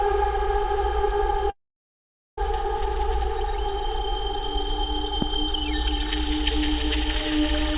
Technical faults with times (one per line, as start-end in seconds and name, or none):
1.50-2.39 long network dropout
5.22-5.24 loud pop